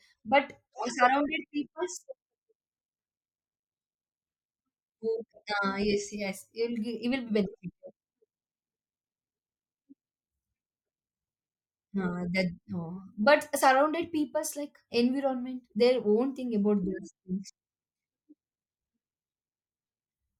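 A short stretch of recorded speech, and nothing technically wrong turns up in it anywhere.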